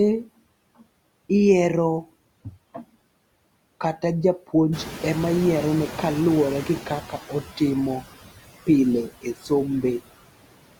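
Noise suppressor artifacts run through the whole clip. The suppressor pulls down, frame by frame, the bands it judges to be steady noise, by about 20 dB here. The background therefore drops away in the gaps and comes back up beneath the speech, so the floor pumps with the talker.

The room noise steps up by about 13 dB at around 4.5 s, settling roughly 14 dB below the speech. From 4.72 s to 7.14 s the noise suppressor is catching up. Its noise estimate lags the new level, so the louder background at first passes with only about 10 dB of reduction. It then sinks gradually over about 2.4 s as the estimate adapts, and the rise is heard as a swell that slowly fades back down.

Between 7.09 s and 7.61 s, speech is cut by the noise suppressor. Just as the estimate finishes adapting, the suppressor treats part of the speech as noise and turns it down with the background, by as much as about 8 dB. 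Roughly 150 ms of material in that span is affected. The affected parts of the speech come out swallowed or faint, as if clipped back into the floor.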